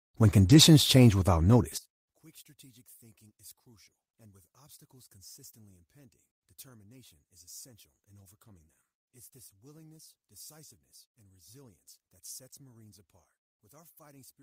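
At 0.45 to 0.59 s, a few separate packets went missing, but each following packet carried a low-bitrate spare copy of the lost one. The decoder played those copies, so about 80 ms was rebuilt from error correction, which fits four separate packets. The speech carries on with no gap, but that stretch sounds grainier and noisier.

From 1.77 s to the end, the likely cause is one stereo channel with its polarity flipped, so the two sides cancel wherever they match once the signal is summed to mono. The centred speech drops by about 33 dB and almost disappears. Only the small differences between the channels remain, leaving a faint trace of the voice for the rest of the clip.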